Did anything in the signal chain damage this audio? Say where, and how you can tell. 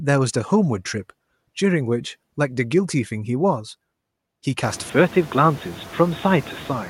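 Yes, two stages left marks. The first is call processing: noise suppressor artifacts run through the whole clip. The suppressor pulls down whatever bands it judges to be steady noise, by about 18 dB, one frame at a time. So the background dips in the gaps and swells back under the speech. It gets more obvious once the room noise climbs by about 25 dB around 4.5 s.

The second is at the input: from 4.90 s to the end, the speech suddenly loses its top end, so it turns dull and boxy. There's no gap at the changeover and no real level jump. The new device's own noise floor sits far below the speech. A hard band limit appearing partway through like that is most likely the system switching to a poorer input device, maybe a headset's call profile.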